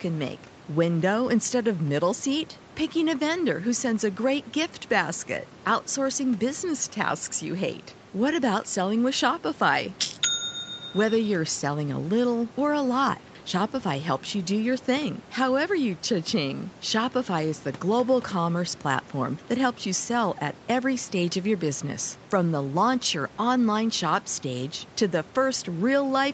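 No technical faults can be heard anywhere in the recording. The speech carries the narrowed band of call microphone processing, with nothing above 8 kHz, and a low room noise sits about 23 dB beneath it.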